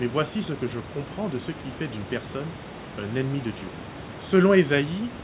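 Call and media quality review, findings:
Nothing stood out on listening to this speech clip; the call path's narrow band, with nothing above about 4 kHz, and the room noise roughly 18 dB below the speech are as expected for this route.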